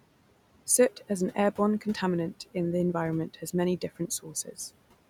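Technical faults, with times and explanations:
Throughout: noise suppressor artifacts. The suppressor pulls the room noise down about 18 dB frame by frame, so the background dips between phrases.
3.81 to 4.56 s: speech cut by the noise suppressor. Quiet speech was mistaken for noise. Around a fifth of a second drops by up to about 14 dB and sounds swallowed.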